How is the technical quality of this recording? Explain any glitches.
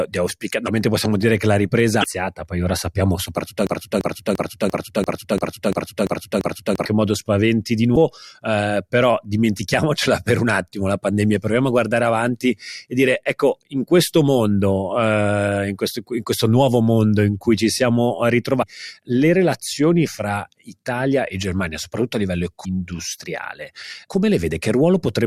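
The recording has two kinds of fault: five short bursts of damaged data in the compressed stream, and one broken-record loop lasting about three seconds.

Damaged data in a compressed stream occurs at 0.64–0.69 s (between "di auspicare" and "possiamo dire che la"), 2.00–2.04 s, 7.93–7.97 s, 18.59–18.63 s (between "in cui ci siamo" and "le relazioni fra") and 22.61–22.65 s. Each lasts about 40 ms. Corrupted bytes make the decoder misread frames and lose sync until it finds the next valid header, so each event is heard as a brief chirp or blip.

The broken-record loop runs from 3.67 to 6.85 s, after "poi ora sappiamo soprattutto" and before "modo spaventi di". A 343 ms fragment repeats exactly nine times back to back, which gives a stuttering, mechanical cycle. The likely cause is that the player or stream stalled and kept resending the last buffered fragment. The speech that should have played during those three seconds is missing.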